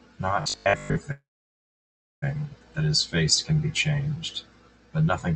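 From 0.42 to 0.98 s the speech turns into a rigid metallic buzz at 50 Hz, robotic sound from repeated short buffers, likely caused by audio arriving too seldom so that most of this stretch is 20 ms repeats. A spectrogram would show evenly spaced harmonics at 50 Hz steps, and the waveform would show identical repeating cycles.

A call audio freeze follows from 1.11 to 2.24 s, likely from delayed packets draining the jitter buffer. The last sound is stretched into a fading buzz or hiss, then about a second of silence, and speech resumes with nothing lost but arrives 1.1 s late. The waveform shows a flat gap, and the spectrogram shows a smeared tail fading to blank.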